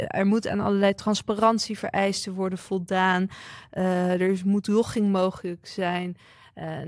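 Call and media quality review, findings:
No faults found in this speech recording.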